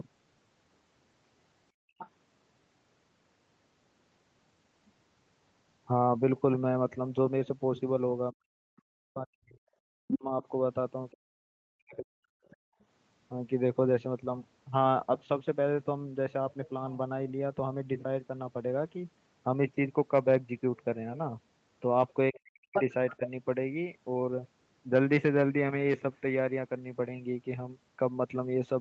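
Background gated by the echo canceller hits this speech recording from 1.72 to 1.98 s. The room sound drops by about 33 dB for roughly a third of a second while the canceller clamps the microphone during loudspeaker playback, then returns once it releases.

The other side's voice leaking through follows at 1.98 to 2.09 s, well below the talker. A much fainter scrap comes at 12.45 to 12.84 s, and from 22.34 to 23.29 s it comes through about as loud as the talker. Each time, the likely cause is loudspeaker sound that the echo canceller failed to remove from the microphone.

Speech suppressed in double talk appears at 8.32 to 10.43 s, 11.13 to 12.77 s and 22.32 to 23.21 s. The talker's level drops very deeply in pieces, likely because both sides spoke at once and the canceller turned everything down rather than separate voice from echo.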